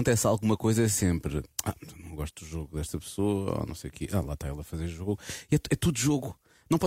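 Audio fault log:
Nothing stood out on listening to the speech in this recording.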